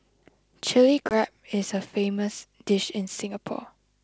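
At 1.09 s the speech drops into a hard-edged silent gap. This is packet loss on an ADPCM call. About 20 ms of audio goes missing, which fits a couple of lost packets. The decoder fills the hole with silence. Its adaptive predictor and step size then no longer match the sender's. When the speech resumes, it comes back slightly distorted. It settles by about 1.15 s. The G.722 wideband coding around it keeps its clear upper band.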